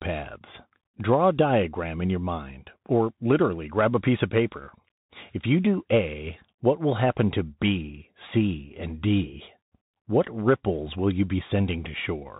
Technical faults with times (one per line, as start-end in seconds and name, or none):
0.00-12.40 Bluetooth CVSD headset codec